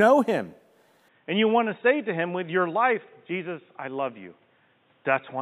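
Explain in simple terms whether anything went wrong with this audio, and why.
Something does go wrong, starting at about 1.08 s and lasting to the end: the speech suddenly turns dull, boxy and noticeably quieter, with a faint new background noise and nothing above 3.8 kHz. There's no gap at the change; it just flips. That's the classic sign of the input switched to a poorer device, likely a cheaper mic or a headset in call mode taking over mid-recording, with its own narrower range, tone and noise.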